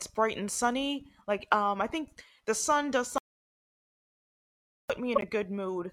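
From 3.18 to 4.90 s the speech is replaced by an audio dropout to silence, likely a lost input, leaving a flat-line waveform and a blank spectrogram for about 1.7 s. At 5.15 to 5.24 s a corrupt frame was decoded across a few frames, giving a chirp or burst of noise with error near -10 dBFS that shows as a misplaced vertical smear of energy.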